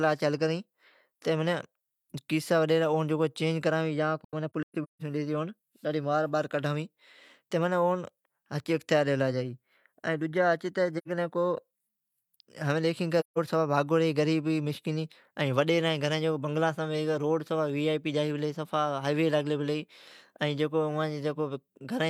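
Around 4.24 to 5.02 s the speech keeps dropping into soft-edged gaps. That's AAC frame loss with muting: the decoder zeroes the missing frames, and the overlapping windows fade each hole in and out. About 427 ms goes missing, scattered over 768 ms, with the longest stretch around 150 ms. Shorter muted holes follow at 10.97 to 11.08 s (85 ms) and 13.20 to 13.38 s (171 ms).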